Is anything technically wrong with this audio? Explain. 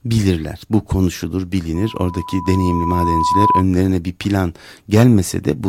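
Yes. From 1.75 to 3.65 s there is loudspeaker feedback squeal: microphone-to-speaker loop gain exceeds unity at 996 Hz, swelling over about two seconds to roughly 5 dB above the speech. It appears as a bright horizontal spectrogram line and a growing waveform envelope.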